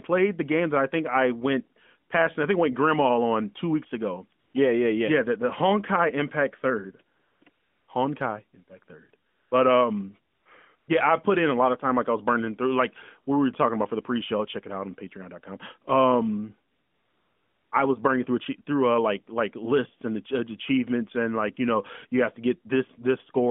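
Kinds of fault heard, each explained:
AMR comfort noise: the phone decided nobody was talking, stopped sending speech frames, and the receiver filled in smooth, steady synthetic hiss. It kicks in after "on two weeks ago", flickers through short gaps from 7.2 to 10.9 s, then runs a full second before "I was burning through".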